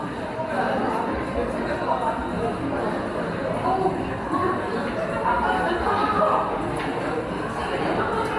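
No technical faults can be heard anywhere in this recording; the signal stays steady and intact throughout.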